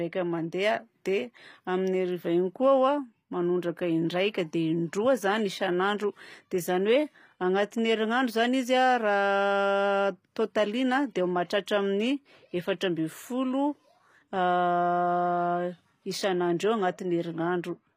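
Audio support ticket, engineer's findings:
Throughout: plainly audible gritty, metallic sibilance; spectrogram shows smeared, copied-looking treble bands, nothing above 15.4 kHz. Likely HE-AAC compression, pointing to about 24 kbps, with treble rebuilt from lower bands.

0.54 to 2.54 s: thin, bright, sibilant. Spectrogram brighter above 1 kHz, about 8 dB up at 10 kHz. Pre-emphasis left on, fitting the CD 50/15 µs curve with no matching cut.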